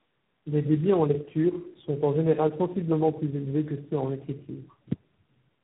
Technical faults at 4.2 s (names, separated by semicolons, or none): tandem speech coding; channel delay (comb filtering)